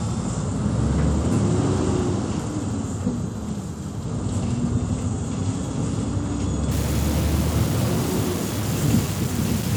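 A sound recording. From 6.72 s to the end it turns grainy. Likely low bit depth without dither, fitting 4-bit truncation, with noise about 15 dB below the signal.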